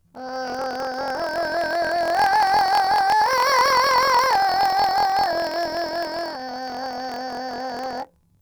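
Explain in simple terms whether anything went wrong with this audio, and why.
Something went wrong for the whole clip: planar audio read as interleaved. The music plays an octave high with a fluttering buzz about 43 times a second, which fits 1024-sample blocks, yet the tempo stays correct, unlike a simple speed-up.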